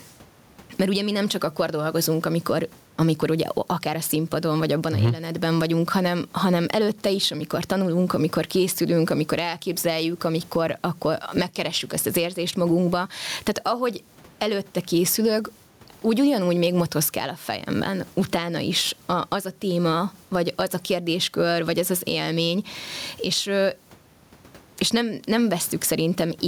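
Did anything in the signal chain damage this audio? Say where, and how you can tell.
Yes. Throughout the speech, the gain ducks by around 15 dB under each loud syllable, which is gain pumping, likely from excessive input gain driving a fast limiter.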